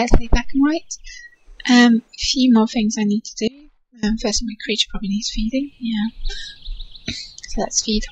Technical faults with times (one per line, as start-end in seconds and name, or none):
3.48-4.03 audio dropout to a faint residue